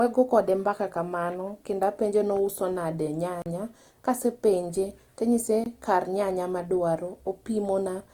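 From the first moment to the end, the speech has a grainy, rough texture, with the tonal parts of the voice turning plainly noisy rather than clean, while the bandwidth stays wide, reaching up to about 20.2 kHz. This points to Opus compression in its music (CELT) mode, likely at a low rate around 24 kbps. The encoder keeps each band's energy but runs short of bits, so it fills detail with folded or noise-like content, producing roughness rather than swirling holes.

At 3.42 to 3.46 s, just after "apenje ni ouso nade" and before "kasepenje tanyise kar nyanya", the sound drops out into a 40 ms hole. At 5.64 to 5.66 s, between "kasepenje tanyise" and "kar nyanya madwaro", there is a shorter 20 ms gap. Both are blocks of digital silence, where samples were replaced by zeros with no fade, probably because the output buffer was not filled in time.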